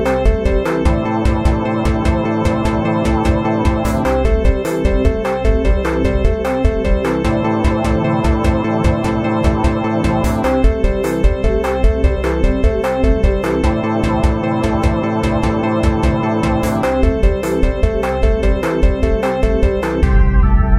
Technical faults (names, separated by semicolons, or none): none